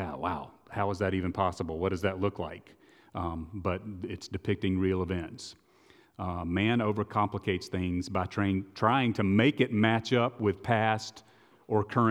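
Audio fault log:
No faults heard anywhere in this speech recording.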